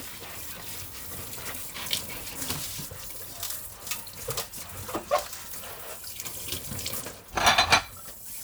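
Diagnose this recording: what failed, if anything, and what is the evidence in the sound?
Nothing in this recording of sounds points to a failure at any stage of the chain. No dropout, glitch or distortion appears anywhere in the audio that would suggest a fault.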